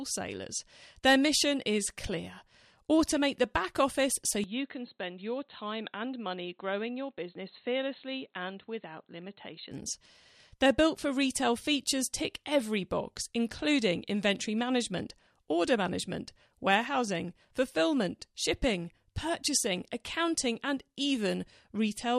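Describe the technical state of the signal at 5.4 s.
At 5.4 s the sound is dull and boxy. It falls inside a stretch from 4.44 to 9.71 s, likely an input switched to a poorer device. That input passes nothing above 4.2 kHz. The level drops about 5 dB, with faint new background noise and no gap at the switch.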